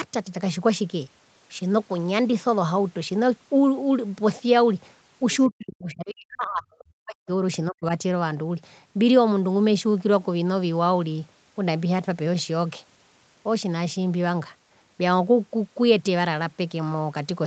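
A speech recording, with a faint second voice slipping in from 5.31 to 5.46 s, roughly 25 dB under the talker, brief. That is other side's voice leaking through, likely loudspeaker echo the canceller failed to strip from the microphone. From 5.48 to 7.28 s the talker's speech sinks and breaks up, dropping by as much as 40 dB for about one and a half seconds in total. It happens again more briefly from 7.7 to 7.85 s. This is speech suppressed in double talk, likely the echo canceller turning everything down while both sides spoke at once because it could not tell the talker from the echo.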